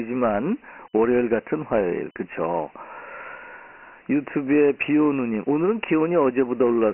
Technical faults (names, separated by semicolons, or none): Dialogic VOX ADPCM